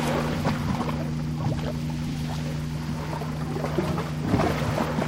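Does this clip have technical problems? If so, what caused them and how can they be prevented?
Yes. From 3.99 to 4.01 s the sound breaks briefly from damaged data in a compressed stream: the decoder misread the corrupted frames, lost sync and searched for the next valid header. Unlike a plain dropout, the disturbance comes from decoder resynchronisation. Verifying files with checksums and using error-checked transfer prevents this.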